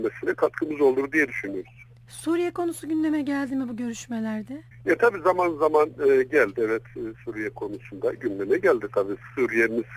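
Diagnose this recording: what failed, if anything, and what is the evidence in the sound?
Nothing in the signal chain has failed: level, continuity and timing stay steady throughout, with no audible discontinuities, distortion or dropouts at any stage.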